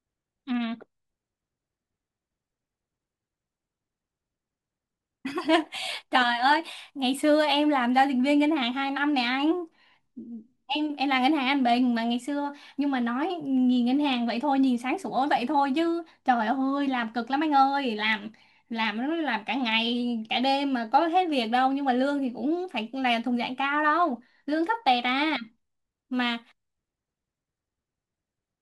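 From 0.13 s to 28.61 s, a faint, steady rattle of tiny ticks runs under the speech about every 30 ms. These are clock slip clicks, likely from two unsynchronised clocks roughly 700 ppm apart, forcing a single sample to be dropped or repeated each time.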